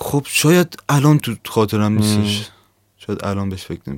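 A short speech clip with one electrical switching spike at about 1.20 s: a sharp snap, over in a couple of milliseconds and peaking at roughly -10 dBFS. It sits on top of the audio rather than replacing any of it. The likely cause is a nearby switch, relay or static discharge arcing briefly, with the audio line picking up that burst of interference.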